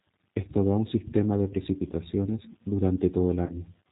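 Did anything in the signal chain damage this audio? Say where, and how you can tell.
Yes, two stages. At the codec stage, the whole clip carries G.729 coding at 8 kbit/s. Nothing above 4 kHz survives. The speech sounds rough and synthetic throughout, because it is rebuilt from a vocal tract filter, a pitch predictor and a few pulses per frame.

At the network stage, there is VoIP packet loss concealed by the speech codec, from 3.46 to 3.54 s. About 30 ms of audio went missing, which fits one lost packet. The decoder extended its last pitch and filter with falling gain, giving a brief stretched sound that fades. Recovery stayed weak past the gap.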